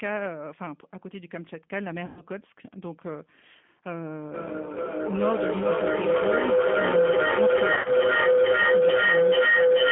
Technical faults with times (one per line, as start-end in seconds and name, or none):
0.00-9.92 G.729 codec
2.06-2.22 VoIP packet loss concealed by the speech codec
4.34-9.92 feedback howl
7.74-7.90 VoIP packet loss concealed by the speech codec